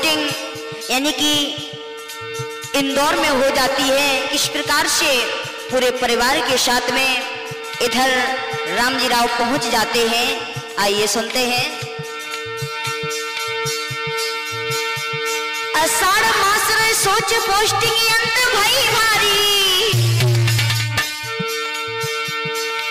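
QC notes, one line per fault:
Nothing stood out on listening, and there is nothing to log for this clip.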